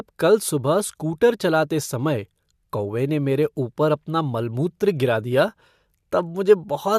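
No technical faults can be heard anywhere in the recording.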